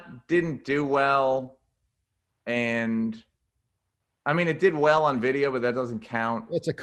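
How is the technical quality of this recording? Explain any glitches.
A call-quality recording, with the usual Opus coding haze and highs that stop around 12 kHz, which fits a codec running at about 32 kbps. Two kinds of packet glitch show up.

From 1.43 to 1.50 s there's short concealed packet loss: two back-to-back 20 ms chunks of audio didn't arrive in time. Each time, the receiver extended the preceding sound for about 11 ms and then blended back into the real signal. Since the two gaps sit right next to each other, you hear roughly 60 ms of smeared, wobbly sound instead of a clean stretch.

At 4.96 s, and again from 5.94 to 5.96 s, there's a lost packet rebuilt from error correction. In both cases a single 20 ms packet went missing, but the next packet carried a low-bitrate backup copy that the decoder played in its place. There's no dropout, just a brief patch that sounds grainier and noisier than the audio around it, because that backup was coded much more coarsely.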